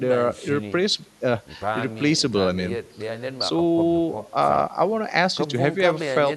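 No faults are audible anywhere in this speech recording.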